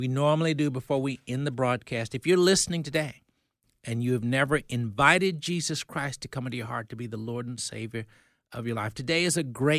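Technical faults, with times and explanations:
No technical faults can be heard anywhere in the speech recording.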